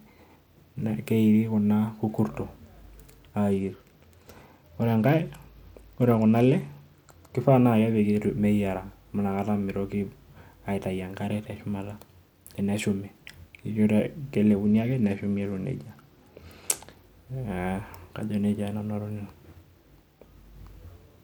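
From 3.51 to 7.37 s and again from 14.64 to 17.05 s, the speech dulls and turns gritty, a Bluetooth SBC bit pool drop. Starved of bits, the encoder gives the top sub-bands few or no bits and quantises the rest coarsely, which fits a fall from a bit pool of 28 to 13, around 102 kbps. On a spectrogram the upper bands go blank or patchy, with grainy speckle below. The waveform barely changes, and full treble returns at each end.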